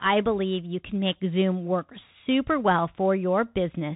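From start to finish, the speech carries the sound of a Bluetooth CVSD headset codec. Nothing passes above about 3.8 kHz, so the top of the voice is gone and it sounds narrow and boxed-in. The damage is plainly audible. CVSD sends one bit per sample, marking only up or down, with an adapting step size. The rate points to a 64 kbps link. Loud high sounds outrun the step and distort. S sounds turn scratchy. A granular hiss sits beneath the speech.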